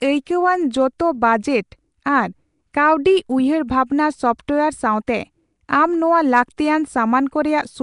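A speech clip with coding damage that runs from start to finish. The sound is rough and grainy, with a hissy fringe around it. It also has a smeared, underwater character. Nothing is heard above about 10.6 kHz. The likely cause is Nellymoser compression, the old Flash microphone codec. It spends very few bits on each block, and bands it skips are filled with noise instead of real detail. The damage points to a rate near 44 kbps.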